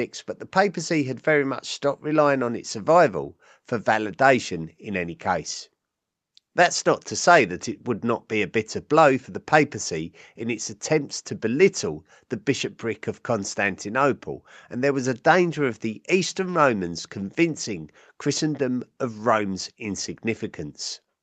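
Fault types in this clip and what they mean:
The speech carries nothing above about 8 kHz, the expected top end after call microphone processing and an Opus-coded WebRTC call path, and its sound fits a setting around 48 kbps, with no faults present.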